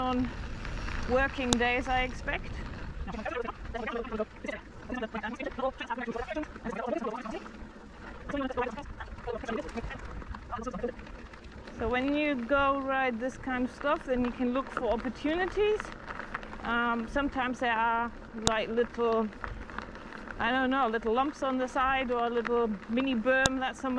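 Sharp, loud clicks at 1.53, 18.47 and 23.46 seconds are file header played as audio: leftover WAV header bytes between joined pieces, showing as thin tall waveform spikes and vertical broadband spectrogram lines.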